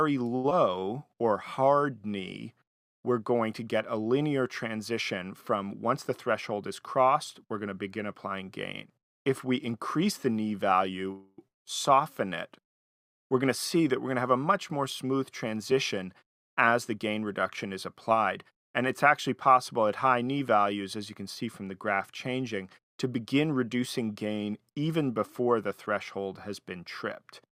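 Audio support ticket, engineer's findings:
Short stall from a late packet, 0.35 to 0.46 s. A sound is held about 86 ms too long, with a slight buzz or dip, then resumes at the same point with nothing lost. Component: receiver jitter buffer. A packet arrived late, the buffer ran empty, and concealment stretched the last frame until it landed. Playout delay grew by 86 ms.

Short concealed packet loss, 0.50 to 0.53 s. A brief smear or wobble. About 40 ms of audio never plays and only about 7 ms is synthesised across the hole before the signal blends back in. Component: decoder packet loss concealment. Packets missed their deadline and were discarded, which also trims roughly 30 ms off the delay built up by the stall.

Jitter buffer speed-up, 6.09 to 7.43 s and 14.09 to 18.19 s. Audio runs hurried at unchanged pitch, about 105% and 106% of normal speed. Component: jitter buffer time-scale adaptation. 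After a backlog, the receiver repeatedly cut short pitch-period segments to bring latency back to target. It removed about 70 ms in the first stretch and about 300 ms in the second.

Call audio freeze, 11.12 to 11.40 s. A 259 ms buzz or hiss continuing the last sound, fading out without reaching silence, then playback resumes where it stopped with nothing missing. Component: network path and jitter buffer. The likely cause is packets held up in transit, draining the buffer so concealment filled the wait. Delay grew by 259 ms.

Long network dropout, 11.48 to 11.67 s. A short concealment tail followed by about 160 ms of silence. Audio returns further on, with about 180 ms never played. Component: network path. The likely cause is a burst of lost packets. Concealment faded out and the lost audio was skipped rather than delayed.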